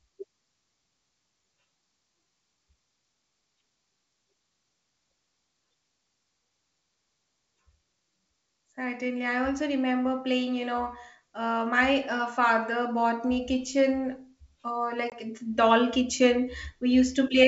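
At 15.10 to 15.14 s, packet loss on an ADPCM call leaves a hard-edged 20 ms silent hole, about one packet. The G.722 decoder's predictor then drifts out of step, so "it's doll" returns slightly distorted before settling.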